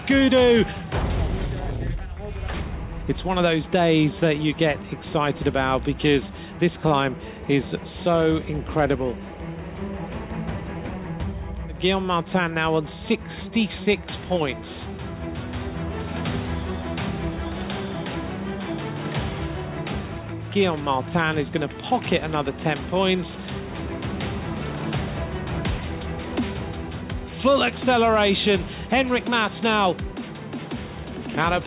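No technical faults can be heard anywhere in this audio.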